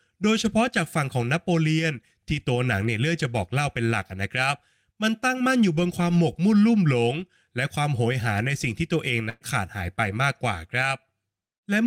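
At 9.29 to 9.43 s, a burst of packet loss: roughly 120 ms of speech vanishes, concealed by the last sound held and fading out, seen as smeared, decaying energy before an abrupt waveform resumption.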